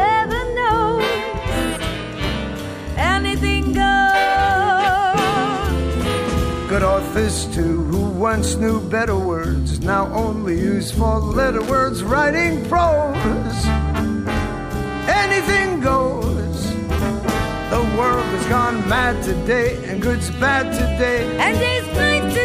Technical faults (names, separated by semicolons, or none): loose connector crackle